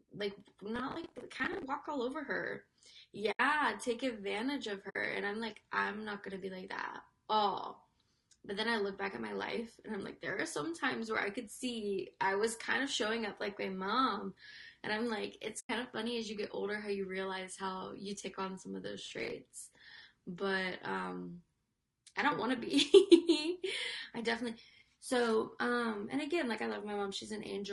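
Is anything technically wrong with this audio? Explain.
Yes, there are three kinds of fault in this speech recording.

Low-delay AAC compression runs throughout. The voice sounds rough and grainy, with noise filling the gaps between harmonics and a thin, synthetic top band. This is likely AAC-ELD, whose short frames resolve pitch poorly, at a low bitrate near 32 kbps.

Processor overload crackle occurs from 0.76 to 1.63 s and from 19.06 to 19.32 s. The processor missed deadline after deadline on buffers of about 10 ms, around twenty in the first burst and about ten in the second. Each miss replayed stale audio with hard edges, producing gritty tearing over the voice.

AAC frame loss with muting occurs at 3.31–3.40 s (80 ms), 4.89–4.96 s (60 ms) and 15.59–15.70 s (100 ms). The decoder zeroed the lost frames' spectrum, and the overlapping windows faded the sound out and back in, leaving soft-edged holes.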